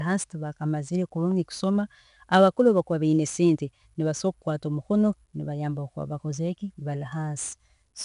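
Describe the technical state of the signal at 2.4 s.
At 2.4 s you're hearing the 4-bit ADPCM compression that runs through the whole recording. Each sample is coded as a coarse 4-bit step from a predicted value, so the error rides along with the speech level as a gritty hiss on louder syllables, plus some roughness on sharp onsets. The damage is plainly audible. Nothing comes through above about 10.5 kHz, which fits a 22 kHz sample rate, so the top end sounds a bit dull too.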